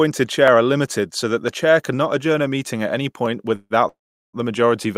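At 0.48 s, just before "are limited so that", there's a single sharp click. That's dropped samples: likely a fraction of a millisecond went missing, so the waveform jumps straight to a later value. Nothing audible is lost, just that tick.

Then come two call audio freezes, likely packets held up so the jitter buffer ran dry. From 3.55 to 3.73 s the last sound stretches into a brief fading buzz, about 150 ms of fill with roughly 20 ms of silence. From 3.88 to 4.36 s it happens again, longer: about 450 ms of fill, most of it (about 390 ms) silence. Each time the speech picks up exactly where it stopped, just pushed later.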